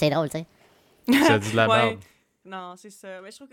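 Speech clip. From 0.0 to 1.03 s a section at the wrong speed runs 1.45 times too fast, so the voice is hurried and raised by around seven semitones. Pitch and tempo shift together, most likely from playback against the wrong clock. Just after "dit de", from 1.58 to 2.74 s, zipper noise appears as the level drops by roughly 20 dB in unsmoothed steps of 2 dB, about seven per second, each one leaving a small click that ticks audibly across the fade.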